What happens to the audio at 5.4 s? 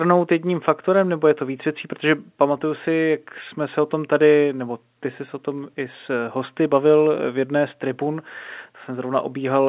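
Nothing goes wrong at 5.4 s: the speech carries straight through that moment with the ordinary narrow, telephone-band sound of A-law G.711 coding and no break, click or distortion.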